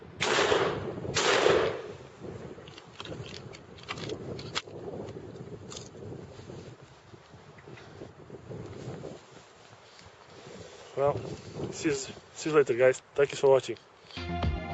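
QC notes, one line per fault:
No faults heard anywhere in this clip.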